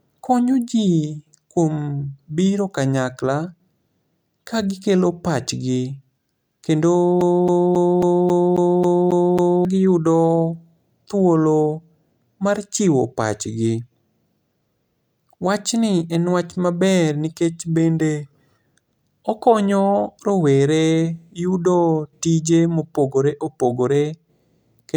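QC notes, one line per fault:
7.21–9.65 s, CD stuck on one turn: a 0.27 s stretch of speech repeats nine times in an even stutter as the laser jumps back one track, with a brief mute at each jump.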